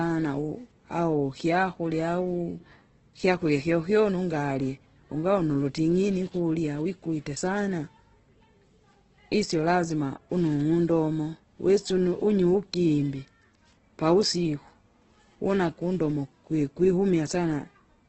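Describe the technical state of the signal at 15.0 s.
Grainy, rough and dull speech with nothing above 8.2 kHz, present throughout the clip; likely heavy Opus compression, consistent with a low rate near 12 kbps that fills bands with noise.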